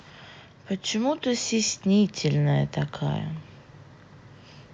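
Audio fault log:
0.90–2.74 s: automatic gain rising. The AGC judged the input too quiet and gradually lifted its gain by about 4 dB, so speech and background noise swell together.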